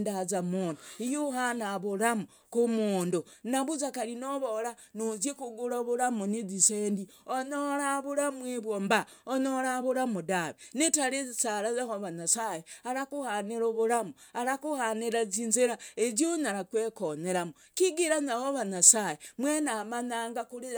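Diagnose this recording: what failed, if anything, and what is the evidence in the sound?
Nothing failed here: listening closely to the speech, there's nothing to point to at any stage of the chain.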